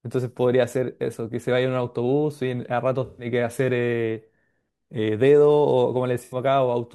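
AAC frame loss with concealment hits the speech at 3.05 to 3.26 s and 6.23 to 6.36 s. About 128 ms and 85 ms of audio were lost. The decoder patched each gap from the last good spectrum, leaving a smeared, phasey blur.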